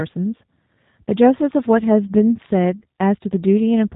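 From start to finish the speech carries G.729 codec damage, plainly audible. Everything above 4 kHz is gone, and the voice has a rough, slightly synthetic grain, which fits an 8 kbit/s rate. The codec rebuilds each 10 ms frame from a vocal tract filter, a pitch predictor and a few pulses. Unlike a plain low-pass filter, which only dulls the sound, it alters the texture itself, with a buzzy, modelled quality.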